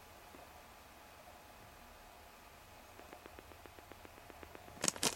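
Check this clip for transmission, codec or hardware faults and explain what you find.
One fault is present: a train of clicks from 3.00 s to 5.07 s. About fifteen near-identical pulses arrive at a regular 7.7 per second, peaking some 15 dB above the surrounding audio. Something is repeatedly injecting a short impulse into the path, likely electrical interference from nearby equipment or a faulty connection or power supply. It is heard as steady ticking laid over the sound, continuing through any quieter gaps until shortly before the clip ends.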